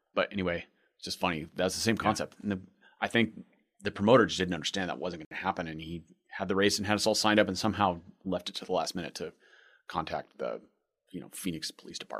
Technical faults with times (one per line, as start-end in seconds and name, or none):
5.25-5.31 Bluetooth stall